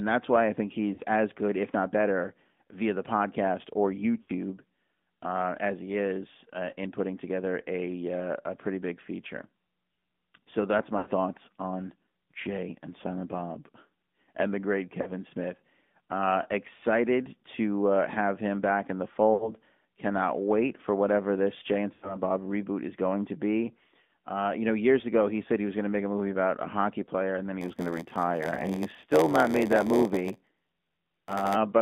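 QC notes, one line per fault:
Throughout: AMR narrowband mobile codec. Plainly audible low-bitrate coding, around 10.2 kbps, reduces the sound to a modelled vocal tract excited by sparse pulses, giving a buzzy, synthetic edge. On a spectrogram, energy is confined between 200 Hz and 3.6 kHz, with nothing above.
0.94–1.00 s, 4.22–4.30 s (after "via the podcast or"), 10.98–11.08 s (before "thoughts on"), 15.02–15.12 s, 19.34–19.53 s, 21.94–22.17 s: lost AMR speech frames. Runs of 40 to 80 ms fail, and the decoder repeats the last good settings at falling gain. Each gap is heard as a smeared, fading warble. The waveform shows a decaying envelope, and the spectrogram shows flattened, stretched harmonics.
27.60–31.57 s (after "hockey player and then"): block size mismatch (padded). Each block is zero-padded before it is read, which inserts regular short gaps. These produce an 86.1 Hz buzz and slow the audio to 0.938×, consistent with a 512-sample read buffer. 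The waveform shows evenly spaced silent notches, and the spectrogram shows periodic vertical stripes.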